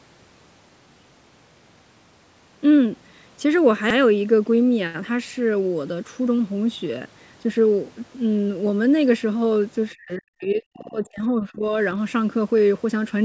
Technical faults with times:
3.90-3.97 repeated buffer
9.95-11.72 speech suppressed in double talk
10.82-10.94 repeated buffer

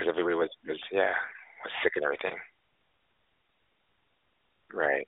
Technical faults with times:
2.28-2.34 lost AMR speech frames

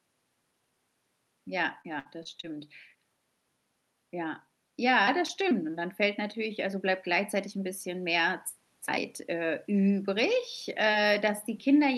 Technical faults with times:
1.81-2.45 repeated packet loss (robotic sound)
5.07 microphone volume stepped up

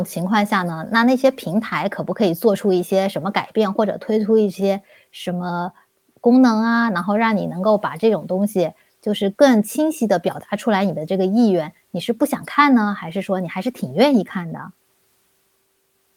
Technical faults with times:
none

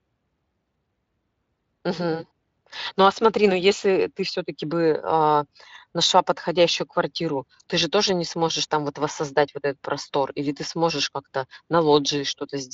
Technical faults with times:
none

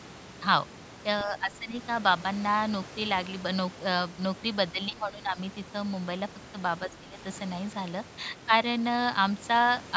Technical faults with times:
1.19-1.24 other side's voice leaking through
1.25-1.74 speech suppressed in double talk
4.89-5.38 speech suppressed in double talk
6.87-7.18 speech suppressed in double talk

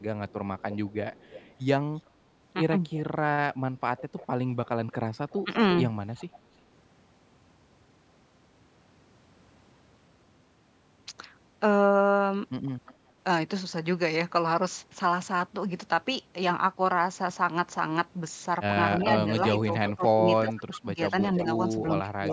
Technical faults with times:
0.28-3.04 echo leak
3.97-6.26 echo leak
5.44-5.51 speech suppressed in double talk
12.87-12.94 echo leak
19.00-21.43 echo leak
19.23-22.27 speech suppressed in double talk

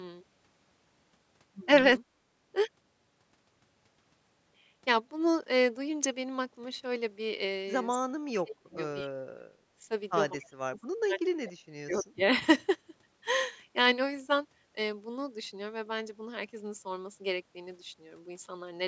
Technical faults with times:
2.04-2.20 background gated by the echo canceller
7.94-8.77 speech suppressed in double talk
8.73-8.77 echo leak
9.03-9.58 speech suppressed in double talk
10.35-12.24 speech suppressed in double talk

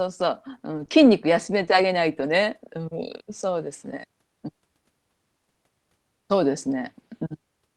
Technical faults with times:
0.77-5.57 scattered short gaps

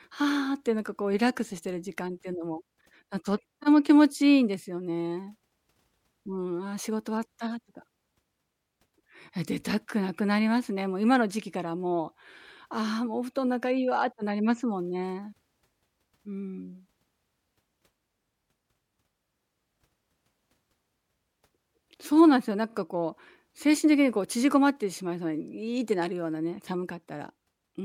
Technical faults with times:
3.62-3.65 repeated frames
22.69-22.74 repeated frames

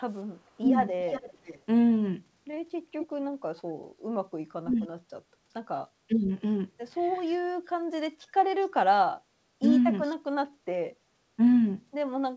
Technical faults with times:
0.47-10.16 echo leak
0.59-0.65 speech suppressed in double talk
3.18-6.15 speech suppressed in double talk
9.61-9.65 speech suppressed in double talk

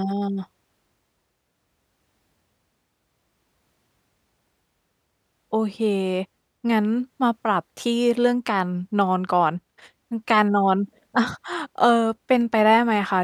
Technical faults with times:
none

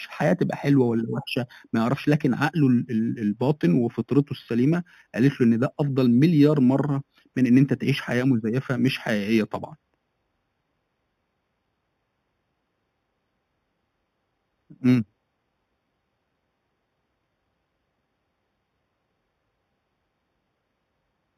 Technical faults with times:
0.00-21.38 imaging from linear upsampling

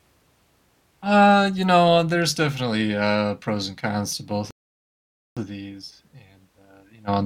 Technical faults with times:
4.51-5.37 rebuffering stall

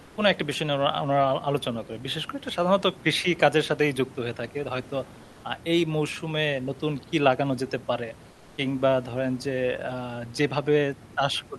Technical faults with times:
0.03-0.17 comfort noise in place of the background
5.23-5.43 comfort noise in place of the background
8.31-8.57 comfort noise in place of the background

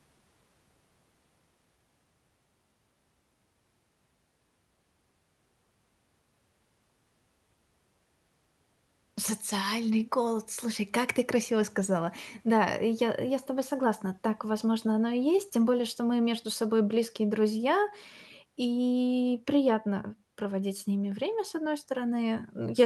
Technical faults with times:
none

